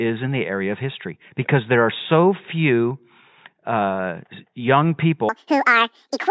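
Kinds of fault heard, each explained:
Wrong sample rate: the samples are read out faster than they were captured, with no conversion, so pitch and tempo rise together. From 5.29 s to the end at 6.30 s the speech runs twice as fast and an octave high (12 semitones), which fits 8 kHz material played at 16 kHz. On a spectrogram the harmonics spread twice as far apart, with the band limit jumping from 4 kHz to 8 kHz; the waveform's pitch periods halve in length.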